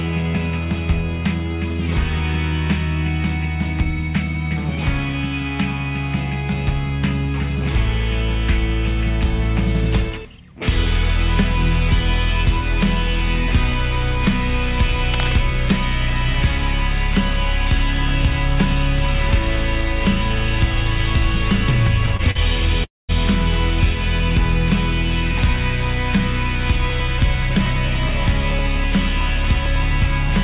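From 15.09 to 15.38 s, a worn cable, connector or control was likely moved, its contact resistance jumping rapidly: cable scratch noise. Dense, uneven bursts of noise about 10 dB below the sound scratch and rustle over it for that moment.

Between 22.06 and 22.40 s, packets kept arriving late, so the jitter buffer ran dry four times in a row, giving repeated stalls (stutter). The receiver stretched the last sound to bridge each wait, the longest about 41 ms, adding 78 ms in total, so the audio drags and stutters without losing anything.

At 22.84 s, packets were likely held up in transit and the jitter buffer emptied completely, causing a call audio freeze lasting until 23.11 s. The last sound is continued briefly, then gives way to about 200 ms of silence before the audio resumes exactly where it stopped.

From 26.76 to 30.30 s, the jitter buffer held more audio than its target, so the receiver made a jitter buffer speed-up. 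It trimmed short pitch-period pieces, about 150 ms altogether, to cut the delay. The sound runs about 4% fast at unchanged pitch. Throughout, nothing is heard above 4 kHz, which fits a narrowband G.711 call codec.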